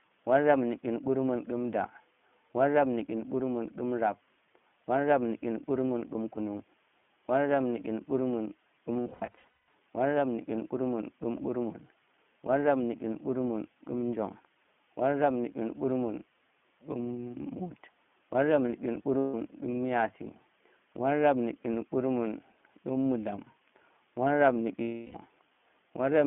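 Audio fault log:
Throughout: iLBC codec. The 150 Hz to 3.4 kHz band and slightly rough, synthetic speech fit iLBC at 15.2 kbps, coding each 20 ms frame independently.
8.94–9.74 s, 19.18–19.35 s, 24.82–25.16 s: lost iLBC frames. The decoder repeats the last pitch cycle mixed with noise, so each gap sounds like a held, buzzy vowel. About 500 ms is lost in scattered bursts across the first span, the longest around a fifth of a second, then 160 ms and 320 ms. Speech recovers almost immediately.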